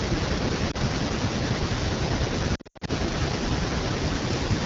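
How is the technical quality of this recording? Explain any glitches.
The technical quality is poor: the speech sounds rough and raspy throughout and breaks up twice.

Throughout, the rasp and grainy texture come from the AMR wideband (HD Voice) codec running at 8.85 kbit/s, one of its lowest rates, too thin for clean speech.

From 0.71 to 0.77 s there is a brief dip and warble. From 2.55 to 2.90 s the sound drops out in patches, with about 220 ms missing and the longest gap 80 ms. These are lost AMR speech frames: the decoder repeats the last good settings at falling gain.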